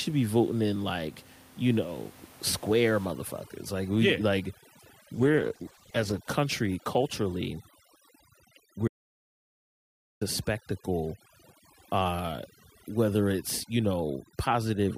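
From 3.06 s to the end of the speech, overdone noise removal takes hold. The room noise, about 23 dB below the speech, is pulled down and breaks up into twinkling specks, and the gating of individual frequency bands strips quiet detail from the voice.

At 5.14 s a call bitrate drop sets in and lasts until 6.27 s, with the coarsest coding for about 1.07 s. The voice turns rough and muffled as the high frequencies vanish, which fits an encoder falling from around 64 kbps to 13 kbps before recovering.

From 8.88 s to 10.21 s there is an audio dropout to silence lasting about 1.33 s. The speech cuts off abruptly into silence, with no room tone at all, and resumes mid-flow. The likely cause is lost input with the recorder still writing silence.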